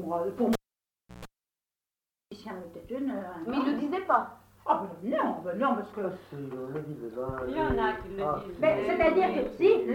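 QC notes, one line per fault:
0.53–1.25 s, cable pulled and plugged in: a pop as the live cable leaves the jack, about 0.67 s of near silence, then 133 ms of 60 Hz mains buzz while only the plug tip makes contact, and a second pop as full contact restores the sound.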